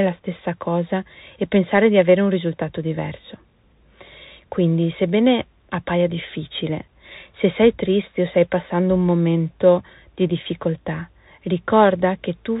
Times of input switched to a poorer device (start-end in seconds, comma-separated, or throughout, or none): none